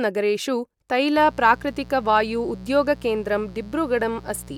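From 1.17 s to the end, a mains buzz sits under the speech. It is a steady, raspy buzz built on 60 Hz. Something like a dimmer, rectifier or unshielded lead let sharp switching spikes into the signal. They arrive twice per mains cycle. That spreads harmonics of 60 Hz far upward, into the kilohertz range. The buzz is about 20 dB below the speech.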